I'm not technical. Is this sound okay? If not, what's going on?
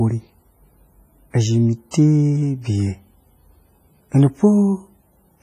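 No. The whole clip carries heavy damage from squeezing the file down hard, most likely WMA compression. It sounds washy and ringing. A hiss rises and falls along with the speech. The compressor saves space by throwing away detail. Very faint parts of the sound are simply dropped, and nothing at all is left above 15.4 kHz. So the top end sounds dull and the rest sounds smeared.

There is also one short pre-echo, from 1.91 to 1.94 s, just after "izhi me". A sudden sharp sound arrives there, but a brief hiss of about 28 ms creeps in just before it. The compressor handles sound in small chunks. The roughness meant for the loud moment leaks into the quiet moment before it. That blurs the start, so the sharp sound comes across softer and less crisp.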